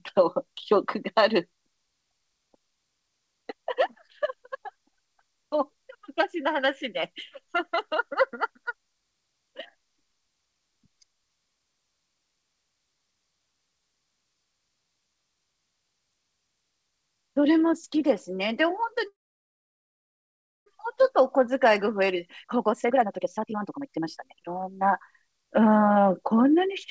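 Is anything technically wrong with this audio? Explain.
Yes, there are two faults. From 19.08 to 20.68 s there is a call audio freeze: the sound stops, leaving about 1.5 s of flat, empty waveform and a blank spectrogram, then resumes where it left off. This was likely caused by delayed packets draining the jitter buffer. From 21.20 to 25.76 s a jitter buffer speed-up removes repeated short pitch-period slices, roughly one and a half seconds in total, to recover that delay. The audio runs at 134% speed with unchanged pitch and sounds hurried. On the waveform, syllables look compressed in time, while spectrogram harmonics stay at the same height. Throughout, the spectrogram shows nothing above 8 kHz, consistent with the G.722 call path.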